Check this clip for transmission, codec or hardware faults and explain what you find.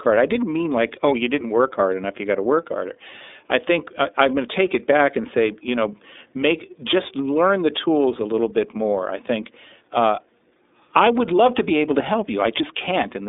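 One fault is present: the speech has passed through the iLBC codec for the whole clip. The band is narrow, running from about 300 Hz to 3.7 kHz, with nothing above 3.8 kHz. iLBC codes each 30 ms frame's excitation on its own, without drawing on the frame before. That frame length and the coarseness fit the 13.33 kbps mode. The codec damage is plainly audible. The voice stays clear but sounds rough and slightly synthetic, and it lacks any airy top end.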